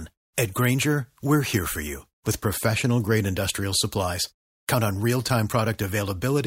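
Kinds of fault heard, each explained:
No technical fault is audible anywhere in this speech recording.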